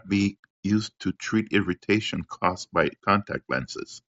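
No technical faults can be heard in this recording.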